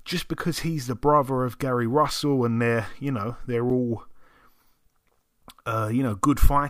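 At 3.70 s the speech is broken by a very brief blip, a tiny glitch lasting only a few milliseconds before the audio carries on. It comes from damaged data in the compressed stream: a small stretch of the encoded bytes at that point was corrupted, so the decoder misread the affected frame, briefly lost its place in the bitstream and had to resynchronise on the next valid frame header.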